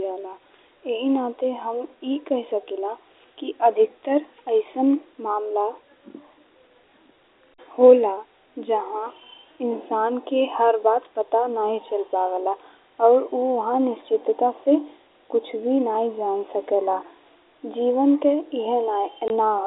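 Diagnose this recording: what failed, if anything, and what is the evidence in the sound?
Network stage: packet loss filled with silence cuts a 20 ms hole into the speech from 19.28 to 19.30 s, which fits two 10 ms packets. The gap is silence with hard edges, unlike concealment's smeared repeats, and the narrow G.711 telephone band continues intact on either side.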